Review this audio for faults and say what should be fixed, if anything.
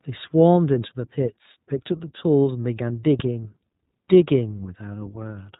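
The speech is band-limited to about 4 kHz throughout and sounds slightly rough and synthetic, the signature of the iLBC codec. It codes each frame's excitation independently, and the plainly audible damage fits 20 ms frames at 15.2 kbps. To prevent this, use a wideband codec such as Opus at a higher bitrate on this path.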